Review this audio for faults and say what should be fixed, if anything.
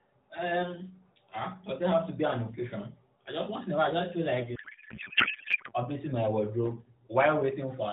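Codec payload misread from 4.56 to 5.73 s, just before "updating my wardrobe": the speech gives way to garbled noise and warble that barely tracks it, which points to octet-aligned AMR frames being unpacked as bandwidth-efficient, so every field lands in the wrong place. The narrowband AMR-NB path itself carries the speech with light coding damage and nothing above 4 kHz. To prevent it, make both ends agree on the AMR payload format during session setup, so the receiver always unpacks frames the way the sender packed them.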